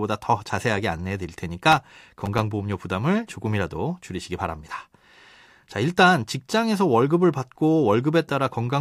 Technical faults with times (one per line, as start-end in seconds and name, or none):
1.72-2.40 processor overload crackle